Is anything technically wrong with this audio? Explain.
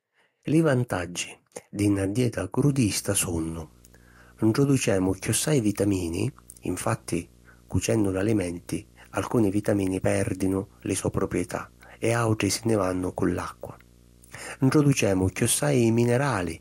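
Yes. Video or display buzz runs from 2.68 s, just after "vantaggi di na dieta", to the end of the speech at 16.60 s. A screen or video cable couples into the audio, adding a 59.94 Hz field-rate buzz with hash above it and a thin 15.7 kHz line-rate whine, sitting around 30 dB below the speech.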